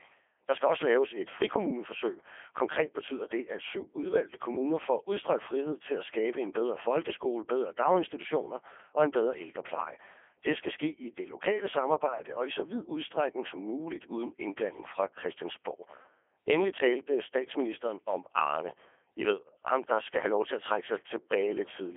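Speech heard through a Codec 2 vocoder throughout: the decoder rebuilds it from sine waves, so it turns buzzy and robotic within 300 Hz to 3.4 kHz, with nothing above 3.5 kHz. Unlike plain telephone band-limiting, the waveform itself is lost, which fits the 3.2 kbit/s mode.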